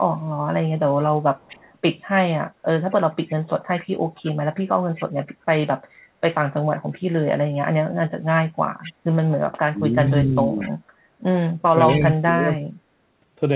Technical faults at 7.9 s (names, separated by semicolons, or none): none